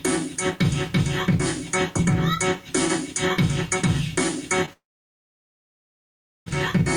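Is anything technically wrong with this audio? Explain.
Yes. There are three faults.

From start to end, the audio has a low bit depth without dither. The grain fits 8-bit samples that were truncated rather than rounded. With no dither, the error tracks the signal instead of spreading into neutral noise. It sits roughly 40 dB below the signal. Quiet passages turn gritty, and the lowest-level detail drops out or sputters between two steps. In denser stretches the error comes across as near-steady hiss. Truncation is the likely cause.

At 4.65 to 4.69 s there is a short concealed packet loss. About 20 ms of audio failed to reach the decoder in time. The receiver patched roughly 16 ms of that by extending the preceding sound, then blended back into the real signal. It is heard as a brief smear or wobble. A very short sound at that point can disappear entirely.

From 4.73 s to 6.48 s there is a long network dropout, the likely cause of this gap. 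About 1.74 s of audio is missing. The receiver first carries the last sound forward as a fading buzz or hiss. For about 1.65 s of the gap, only silence or a low steady noise remains. The audio resumes at 6.48 s. The lost section is never played.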